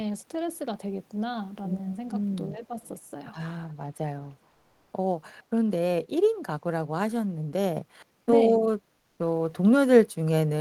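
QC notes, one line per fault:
2.54–2.79 s, speech suppressed in double talk: the speech level dips by roughly 10 dB in pieces totalling about a fifth of a second. The likely cause is an echo canceller unable to separate the near talker from far-end echo while both sides spoke, so it turned both down.
2.84 s, 3.69 s, 4.27–4.35 s, echo leak: faint delayed copies of the voice surface in brief scraps, trailing the original by 424 ms at roughly 35 to 40 dB below the speech. This is likely a loudspeaker-side echo canceller letting residual microphone pickup through, which then returned down the line.
4.51–4.87 s, comfort noise in place of the background: for 360 ms the real background, which sits about 44 dB below the loudest speech, gives way to a smoother noise that is about 1 dB different in level. This likely reflects discontinuous transmission, consistent with Opus DTX, with the receiver synthesising the fill.
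7.77 s to end, sudden gain jump: speech and background noise shift together by about 5 dB at a single instant and hold there to the end. The likely cause is a digital gain change applied from one sample to the next without any ramp.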